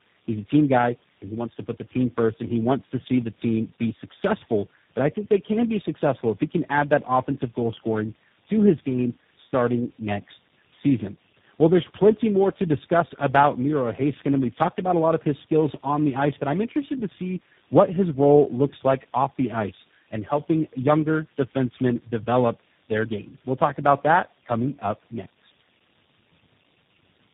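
Speech runs the whole clip through tandem speech coding, with nothing above about 3.7 kHz. The roughness, muffling and warble are heavier than any single narrowband coder would leave, which fits roughly three speech codecs in a row, ending in something like G.729A. Each codec re-encodes the previous one's errors rather than clean input, so artefacts compound. A single low-bitrate codec would sound band-limited but cleaner, without this layered, smeared grain.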